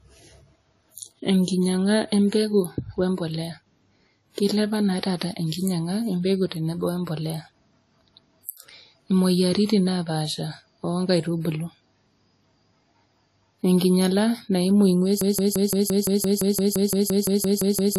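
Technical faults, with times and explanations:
Throughout, transcoding between lossy codecs: nothing above 14 kHz, with layered artefacts suggesting a WMA pass and then AAC-LC, both around 48 kbit/s, likely stacking each codec's damage.
15.21–17.99 s, broken-record loop: just after "enkinyala naimu", a 0.17 s fragment repeats back to back to the end, likely a stalled stream resending its last buffer.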